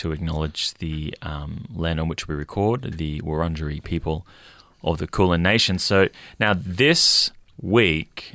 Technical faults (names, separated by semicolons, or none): none